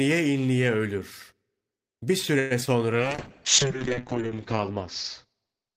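From 2.39 to 2.53 s the sound stretches into a fading buzz for about 112 ms and then resumes where it stopped, a call audio freeze, likely from delayed packets draining the jitter buffer.

At 2.61 to 2.63 s a brief smear replaces 20 ms of sound: short concealed packet loss, where the receiver extrapolated the last audio to cover packets that arrived too late.

Between 2.65 and 2.68 s playback jumps forward almost seamlessly, losing roughly 70 ms. This skip ahead came from audio being discarded while later packets waited.

From 2.79 to 3.09 s the sound drags at 89% speed with unchanged pitch, adding 42 ms. This is a jitter buffer slow-down, repeating pitch periods to rebuild its reserve.

From 2.96 s to the end the sound turns rough, watery and muffled. The call bitrate dropped from 48 to 7 kbps, narrowing the bandwidth from 20 kHz to 8 kHz, and stayed at its lowest for 1.35 s.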